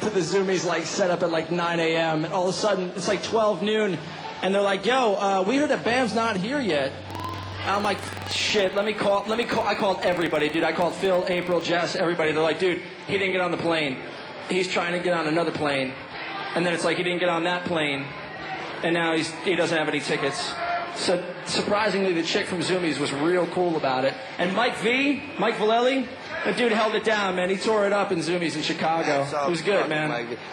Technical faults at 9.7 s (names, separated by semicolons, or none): filter restarted on every block